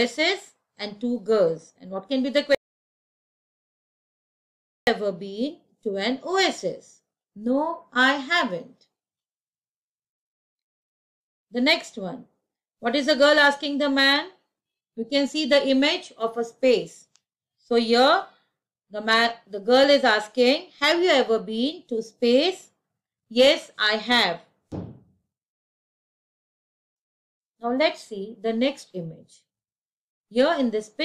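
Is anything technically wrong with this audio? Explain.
Yes. From 2.55 s to 4.87 s there is an audio dropout to silence, about 2.32 s long. The sound stops abruptly mid-flow and resumes just as abruptly. The gap is silent with no room tone or noise floor, which is what separates it from a natural pause or a noise gate closing. The likely cause is lost input, such as a momentary disconnection or mute, while recording carried on writing silence. Whatever occurred in that span is gone.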